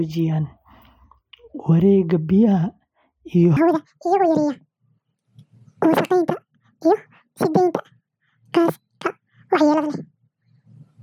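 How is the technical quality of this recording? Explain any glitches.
One glitch stands out: a section at the wrong speed. From 3.57 s to the end, the speech abruptly turns high and hurried, running 1.91 times too fast and sitting about ten semitones higher. Because speed and pitch jump together, the likely cause is that stretch being played against the wrong clock.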